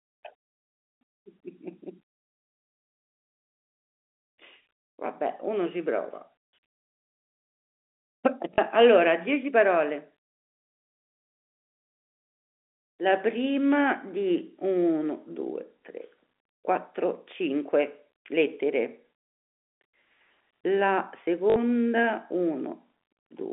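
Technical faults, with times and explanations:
8.54 to 8.58 s and 21.5 to 21.56 s, packet loss with last packet repeated: gaps of 40 ms and 60 ms are filled by replaying the preceding audio chunk. This fits two and then three 20 ms packets. The repeats give a brief 50 Hz robotic buzz over the band-limited G.711 telephone sound.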